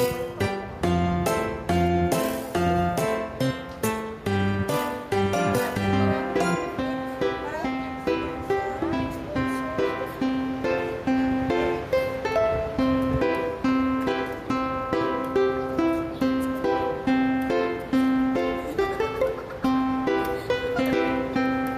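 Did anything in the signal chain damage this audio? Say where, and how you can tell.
Yes. Throughout the clip the background breathes, swelling in the gaps and dropping away under each loud sound by around 5 dB, so the level feels squashed. This gain pumping likely comes from input gain set too high, with a fast limiter or compressor clamping down on every peak.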